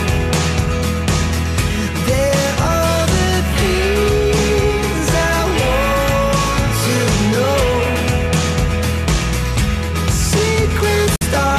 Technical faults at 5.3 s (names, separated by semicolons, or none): none